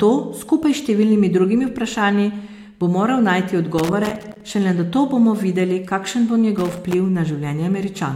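Loose connector crackle hits this speech at 3.78 to 4.41 s and again at 6.58 to 6.94 s: a worn or dirty contact keeps making and breaking as it shifts, chopping the signal into an irregular scratchy burst, with pops wherever DC on the line jumps.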